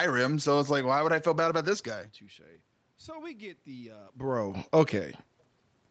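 From 2.42 to 5.21 s, automatic gain rising: after the input fell by about 19 dB, the control slowly added about 4 dB, swelling voice and room noise together.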